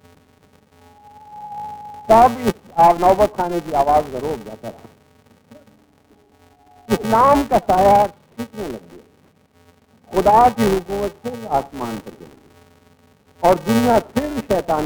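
A filter restarted on every block runs through the whole clip, heard as a steady buzz at 345 Hz that rises and falls with the audio's level. The filter starts each block from silence and leaves a small transient at every boundary. The buzz rate fits a 128-sample block.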